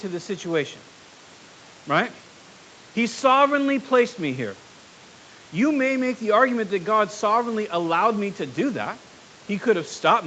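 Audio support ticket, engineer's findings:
No faults found in this speech.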